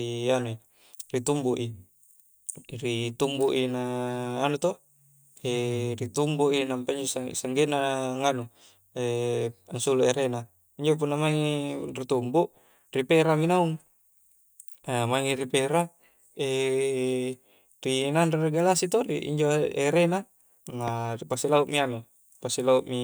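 A sudden voltage spike, likely from a plug, switch, static discharge or driver glitch, enters the signal chain at 20.88 to 20.90 s. It produces a single loud pop, about 10 dB above the speech, lasting roughly 20 ms while the speech continues underneath.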